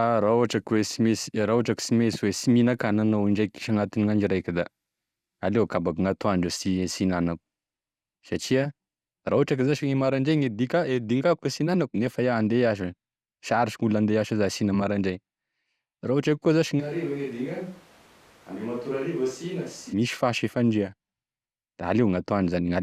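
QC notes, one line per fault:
16.82–19.92 s switch to a distant microphone: abruptly hollow, bass-light, about 10 dB quieter, room noise rising, not just a level dip; likely close-mic lost.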